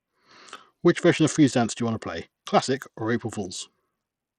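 Throughout, the speech carries Bluetooth SBC compression, likely from a starved bit pool near 80 kbps: treble flickers away and gritty aliasing rides on it, unlike smooth lowpass dullness.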